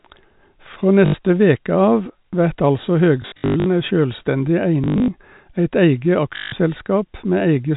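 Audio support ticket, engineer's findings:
Packet loss with last packet repeated: robotic stutter at 1.06–1.14 s before "veke av vert altså", 3.22–3.66 s before "ei sjølvstendig" (scattered, runs up to 100 ms), 4.84–5.08 s before "eit eige", 6.36–6.52 s. Jitter buffer replaying stale audio; buzz near 50 Hz fits 20 ms packets. Repeated audio, not silence, so not plain dropout. The G.711 telephone coding band limit stays steady throughout, so the fault is not in the codec.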